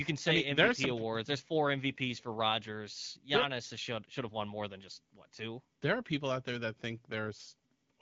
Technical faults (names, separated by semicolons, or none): none